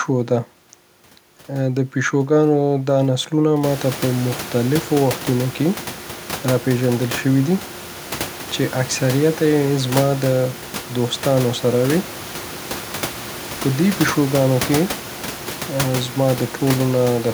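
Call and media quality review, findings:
No faults found.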